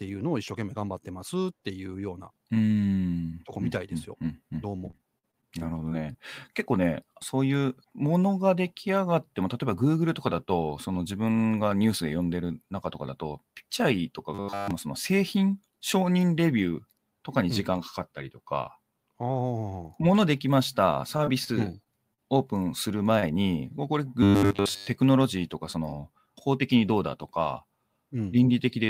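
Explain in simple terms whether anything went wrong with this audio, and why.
Between 4.71 and 6.16 s, and again from 21.17 to 22.20 s, the speech breaks up into choppy fragments. This is repeated packet loss (robotic sound): bits of audio went missing again and again, each hole was patched by stretching the previous sound, and real pieces were lost.

At 14.35 to 14.71 s, and again at 24.23 to 24.87 s, the speech turns into a steady 100 Hz buzz. This is robotic sound from repeated short buffers. Unlike the choppy packet loss, the buzz keeps one rigid pitch, likely because the same 10 ms slice was replayed over and over. The first stretch is almost entirely repeats, and the second mostly so.

Around 23.20 to 23.34 s, a sound is briefly held too long. This is a short stall from a late packet: the audio arrived about 29 ms late, so the last sound was stretched to fill the wait. It differs from packet loss because nothing is missing. 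The playback holds a sound and then carries on from the same place.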